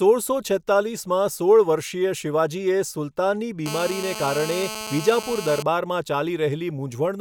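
From 3.66 s to 5.63 s, a hard, raspy buzz cuts across the speech at about 217 Hz, rich in harmonics and unrelated to anything being said. This is GSM phone buzz: a nearby 2G handset on a call transmits in bursts at that rate, and the audio circuitry rectifies the radio pulses into the signal path. The buzz holds steady throughout its two seconds, sitting about 10 dB below the speech.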